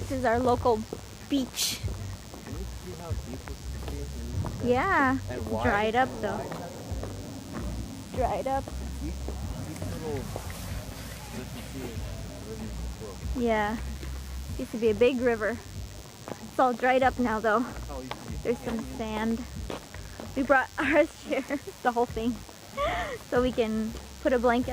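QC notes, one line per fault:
throughout, DECT cordless phone buzz: a nearby DECT handset or base station transmits a radio burst 100 times a second, and the audio circuit rectifies each burst, so a thin, steady 100 Hz buzz rich in harmonics sits roughly 20 dB under the sound.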